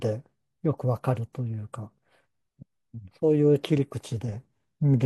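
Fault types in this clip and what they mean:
No faults can be heard in this recording.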